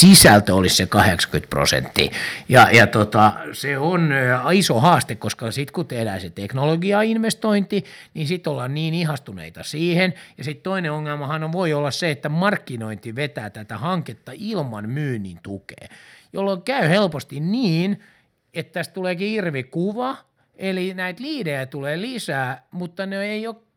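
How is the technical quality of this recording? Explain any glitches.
The recording has clear technical problems in its first few seconds: repeated distortion on loud peaks, followed by sudden drops in level.

Microphone overload appears from 0.0 to 0.38 s, 0.96 to 1.09 s, 1.98 to 2.0 s, 2.54 to 2.84 s and 3.24 to 3.26 s. The input was pushed past the converter's ceiling, by about 9 dB in the opening burst, about 10 dB at 2.54 s, and about 1 to 5 dB elsewhere. The peaks were likely sliced flat, giving loud syllables a harsh, crackly edge. On a waveform these appear as squared-off tops, covering around a sixth of the samples at the start. A spectrogram shows bright vertical smears of added high-frequency harmonics.

Microphone volume stepped down at 0.05 s, 3.3 s and 5.34 s. Each time, the speech and background fall together in a single abrupt step, by about 3 dB, about 7 dB and about 5 dB. 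The first comes in the middle of an overloaded burst and the second right on the heels of overloaded peaks, which suggests software likely reacting to clipping by cutting the input volume. A waveform shows the envelope dropping like a stair, and a spectrogram shows the whole band dimming at once.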